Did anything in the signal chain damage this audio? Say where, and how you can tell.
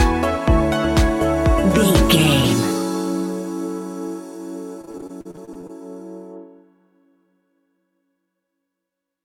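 Yes. Repeated packet loss (robotic sound) at the network stage, 4.81 to 5.71 s: about a dozen brief holes, the longest 39 ms, with about 29% of that stretch patched by extending the previous sound, producing the choppy sound and missing fragments.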